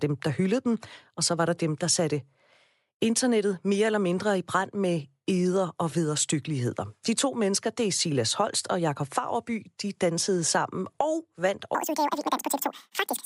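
A speech clip that, from 11.75 s to its end at 13.25 s, right after "dansede sammen og vandt", suffers a wrong sample rate fault: the audio plays exactly twice as fast and a full octave (12 semitones) higher, which fits 24 kHz material being played at 48 kHz without conversion. On a spectrogram the harmonics and formants jump to double their spacing and syllables shrink to half their length; the waveform looks horizontally squeezed.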